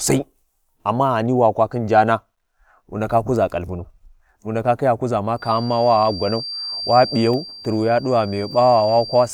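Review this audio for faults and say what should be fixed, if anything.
Feedback whistle, from 5.34 s to the end of the clip: a thin, steady tone at 4.7 kHz sits about 15 dB below the speech and swells and fades slowly in level. This is likely an acoustic loop from a loudspeaker back into the microphone, held just at the edge of feedback, so the gain at that one frequency keeps it ringing without growing into a howl. To prevent it, reduce monitor gain, move the microphone away from the speaker, or notch out 4.7 kHz in the monitor feed.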